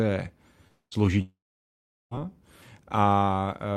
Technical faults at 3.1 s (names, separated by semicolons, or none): none